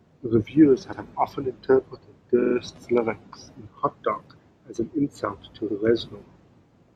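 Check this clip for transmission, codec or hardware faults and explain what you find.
Three repeated frames faults stutter the speech. A short run of compressed frames was decoded again, replaying audio and lengthening it. At 0.92–1.00 s, before "often interpreted", an 85 ms block plays twice. At 2.41–2.54 s, between "often interpreted" and "lyrics in", a 43 ms block repeats three extra times, adding 128 ms. At 5.67–5.76 s, after "as an insult to", an 85 ms block repeats once.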